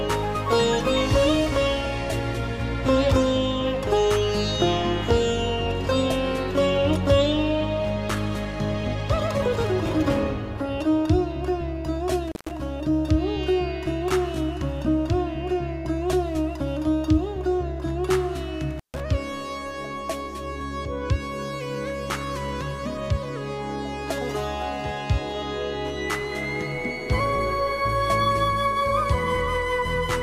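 The audio drops out twice, briefly and abruptly, from 12.28 to 12.51 s and again from 18.71 to 19.02 s. Each gap is bracketed by crackle, and the line is fully open for about 145 ms, leaving faint hiss. This is an intermittent contact: a loose plug or cable connection momentarily breaks the signal path, and the scraping of the contacts as they separate and reconnect produces the crackle at each edge.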